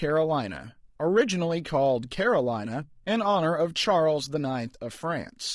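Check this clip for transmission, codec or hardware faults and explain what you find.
There's one codec fault. Throughout the speech, the voice sounds rough and grainy, with a thinned, synthetic-sounding top, likely low-delay AAC compression, consistent with roughly 32 kbps AAC-ELD whose short frames resolve harmonics poorly.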